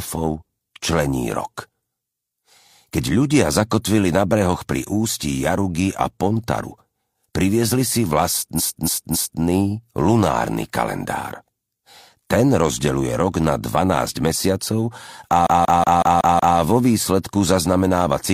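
Repeated frames occur from 8.55 to 9.38 s and again from 15.42 to 16.54 s. A block of compressed audio was delivered more than once, so the decoder replays it and the sound stutters in place. The first block is about 279 ms long and plays three extra times, which points to a run of six frames. The second block is about 186 ms long and plays six extra times, which fits four frames. Together the repeats lengthen the audio by about 0.84 s and 1.11 s.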